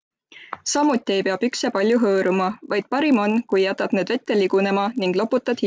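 Throughout, the resampler restarted on every block, converting each 20 ms block alone, pointing to a 24 kHz to 16 kHz conversion, so block edges lose their true neighbours. These edge errors recur 50 times a second, a buzz under the speech that vanishes in pauses.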